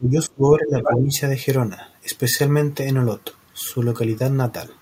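From 0.0 to 1.1 s, with both sides talking at once, the echo canceller likely failed to tell the local talker from loudspeaker echo and turned both down. The result is speech suppressed in double talk: for about a second the voice dips by as much as about 20 dB.

From 0.8 to 1.18 s, the echo canceller likely left part of the loudspeaker signal in the microphone feed. The other side's voice leaks through at roughly the same level as the talker, so a second voice competes audibly for this stretch.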